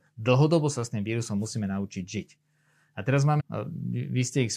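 At about 3.39 to 3.41 s the speech jumps forward with a small blip, and a chunk of the talk just isn't there. That's likely a stream segment skipped: one piece of the segmented stream failed to load, so the player carried on with the next.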